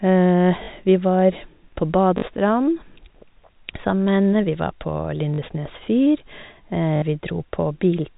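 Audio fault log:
0.64 s, 2.18 s (after "var på"), 5.34 s (after "henne vi var på"), 6.96 s: packet loss with last packet repeated; 40 ms gaps (60 ms last) filled by replayed audio, heard as a brief robotic stutter, fitting 20 ms packets.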